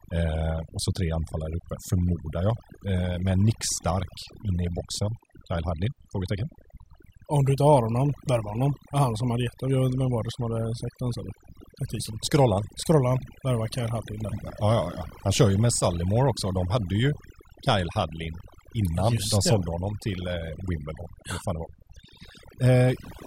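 From start to finish there's overdone noise removal: the denoiser was pushed too hard, so bands near its noise estimate get gated out along with softer parts of the speech. You hear near-silent gaps full of twinkly specks.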